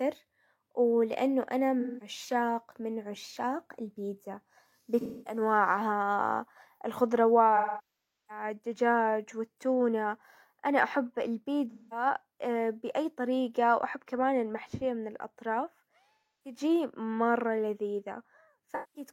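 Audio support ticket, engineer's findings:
AAC frame loss with concealment in speech at 1.80, 5.01, 7.56, 11.70, 16.14 and 18.72 s, 0.17 to 0.73 s long. Decoder rebuilds the gaps from the last good spectrum, giving smeared, noisy patches.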